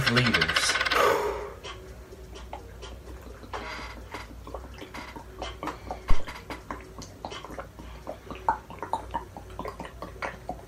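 A phantom power thump lands at 6.11 s and is gone by 6.25 s: a deep low-frequency knock peaking near -6 dBFS that dies away in about 33 ms, caused by a supply switching on or off on a live input and its voltage step surging through the coupling capacitors.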